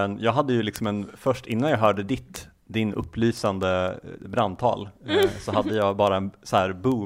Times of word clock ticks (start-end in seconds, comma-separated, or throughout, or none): 0.17-7.00